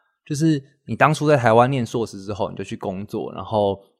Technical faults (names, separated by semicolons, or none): overlap between stream segments